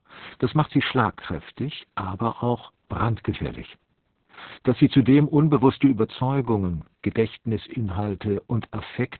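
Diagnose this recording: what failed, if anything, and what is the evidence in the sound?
The failure is at the codec stage: Opus voice compression running at a very low rate. For the whole recording the speech has nothing above 4.2 kHz, giving a narrowband, telephone-like dullness, and it sounds hoarse and faintly robotic with heavy coding damage. Opus has fallen back to its SILK linear-prediction coder in narrowband mode and is coding the excitation very coarsely. The degree of roughness points to a bitrate of around 6 kbps, which fits long frames of about 60 ms.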